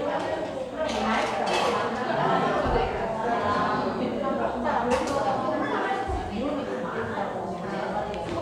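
Nothing here trips me up: the sound just runs along as it should, with no glitches, dropouts or oddities anywhere to point at.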